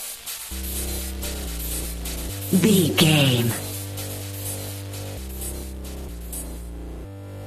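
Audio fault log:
1.84 s, damaged data in a compressed stream: a brief glitch lasting about 14 ms, where corrupted bytes made the decoder misread frames and resynchronise at the next header.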